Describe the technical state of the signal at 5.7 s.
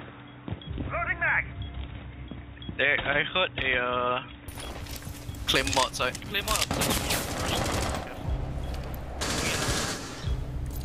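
At 5.7 s the signal is intact, with no dropout, distortion, glitch or other technical fault audible at that moment.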